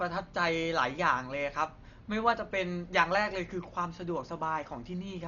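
Dolby Digital compression is the likely cause of the damage running through the whole of this speech. Nothing is present above 7 kHz, so the encoder has narrowed the band, and the heavy degradation fits a bitrate as low as about 40 kbps. Starved of bits, many frequency lines get no mantissa data and are refilled with dither noise at decoding. The result is dull and muffled, with a rough, fluttering grain clinging to the voiced sounds.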